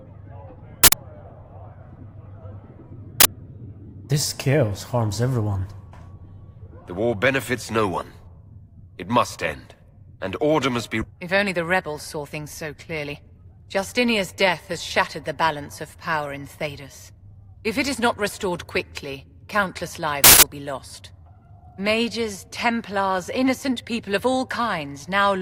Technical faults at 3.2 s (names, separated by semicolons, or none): uninitialised buffer